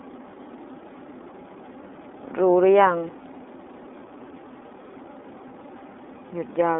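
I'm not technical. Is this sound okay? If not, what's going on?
No. From start to finish the speech sounds thin and boxy, like an old phone line, with a noticeably rough, robotic edge. That comes from the iLBC codec, an internet-calling format that keeps only 250 Hz to 3.6 kHz and rebuilds the voice in separate 30 ms chunks.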